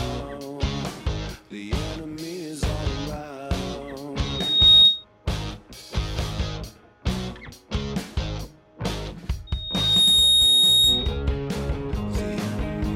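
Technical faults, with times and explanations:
4.24–5.05 s and 9.47–11.23 s, loudspeaker feedback squeal: the microphone picks up its own loudspeaker and the loop runs away at 3.7 kHz, swelling within about half a second into a piercing tone well above the program level.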